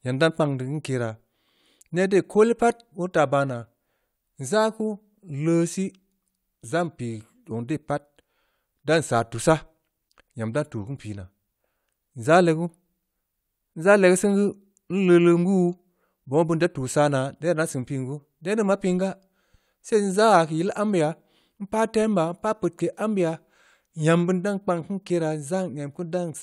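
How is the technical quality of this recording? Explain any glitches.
No glitches or faults detected.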